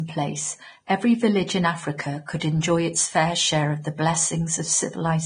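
Throughout, the speech sounds hissy and grainy, with nothing above 9.7 kHz, likely from heavy Vorbis compression at a rate fitting roughly 24 kbps. At 2.26–2.28 s and 2.4 s, brief hiss precedes smeared attacks: pre-echo, where block-wide quantisation noise fills the quiet moment before each onset.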